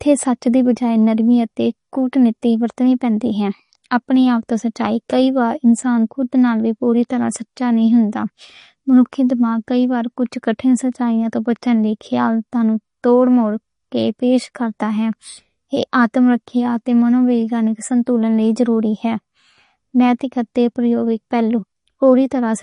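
From start to finish the speech sounds watery and swirly, and nothing is heard above 10.6 kHz. This is likely MP3 compression starved of bits, consistent with roughly 40 kbps, so the encoder cut the treble and let weak frequency lines flicker between frames.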